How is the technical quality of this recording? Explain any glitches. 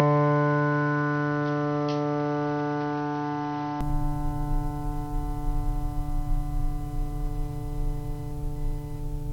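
Two faults affect the music, one running through the whole clip and one confined to its opening seconds.

Computer activity noise sits under the entire recording: a faint buzzing chirp pulsing at roughly 1 kHz, around 40 dB below the music. Processor or peripheral load shifting the shared ground couples into the audio path, so the buzz follows the computer's activity rather than the music.

From 0.0 to 3.81 s, the sound is dull and boxy, with nothing above 6.1 kHz, a level around 5 dB lower, and a separate noise floor roughly 35 dB under the music. At 3.81 s it clears up with no gap. This is likely an input switched to a poorer device.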